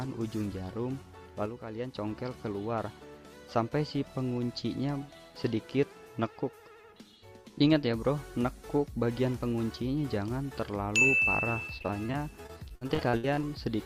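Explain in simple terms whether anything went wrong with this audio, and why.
Sudden gain jump, 1.46 to 1.95 s: the sound and its background drop in level together at once, likely because a volume setting changed instantly instead of gradually.

Repeated packet loss (robotic sound), 11.77 to 13.43 s: the audio keeps dropping out in brief gaps, each patched by stretching the previous sound, so it turns choppy and robotic.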